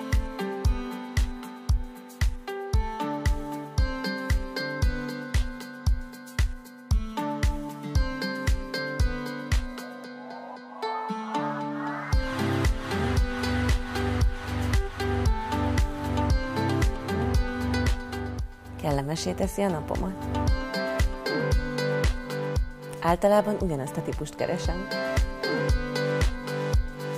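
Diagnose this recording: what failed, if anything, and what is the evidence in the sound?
Nothing failed in this recording, and no fault can be heard in the sound.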